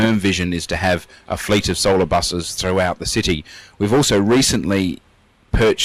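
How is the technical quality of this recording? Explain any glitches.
No glitches can be heard anywhere in the recording. Nothing breaks up the sound, and the playback runs without interruption.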